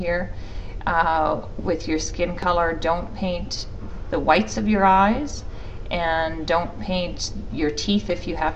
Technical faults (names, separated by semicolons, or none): loud pop